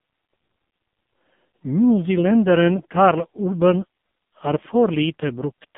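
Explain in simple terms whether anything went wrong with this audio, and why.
AMR narrowband mobile codec, throughout: a phone codec removed everything above 3.7 kHz and rebuilt the speech from a crude model, so it sounds muffled and buzzy.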